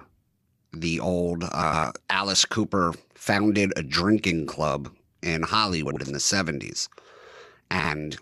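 Frames out of order occur three times. Just after "the old", 1.63 to 1.84 s plays with its two 105 ms halves swapped. The same happens at 5.86 to 5.96 s, just before "in the", and at 7.79 to 7.90 s, with 52 ms halves. Each sounds like a garbled flutter. No time is lost.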